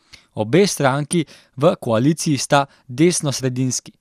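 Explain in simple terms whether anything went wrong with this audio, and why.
At 1.13 s the speech briefly gives a few watery blips. This is DAB burbling: weak reception let a few corrupted bits through, scrambling two tiny slices of sound.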